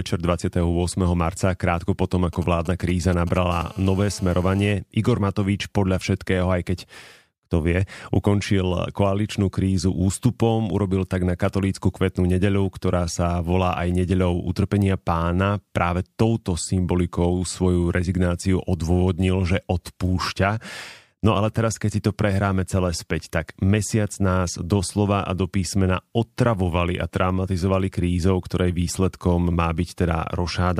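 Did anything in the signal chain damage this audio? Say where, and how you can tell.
Yes. GSM signalling bursts get into the analogue wiring from 2.33 to 3.38 s, just after "marca krátko potom": a galloping dit-dit-dit of brief 217 Hz buzzes, around 20 dB under the speech. A nearby 2G phone's radio pulses are being rectified, and their grouping sets this apart from a continuous buzz.

A GSM phone buzz follows from 3.52 to 4.72 s, also in the analogue stage: a hard, raspy 217 Hz buzz full of harmonics, about 24 dB below the speech, steady and unrelated to it. Unbroken call transmission gives this constant buzz, unlike the intermittent signalling pattern or mains hum at 50 or 60 Hz.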